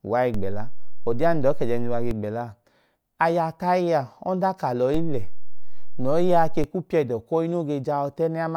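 A DC step shifts the waveform's zero line by about −19 dBFS from 0.34 to 2.11 s and again from 4.94 to 6.64 s. Each shift thumps at onset and release while the speech continues intact, unlike a dropout.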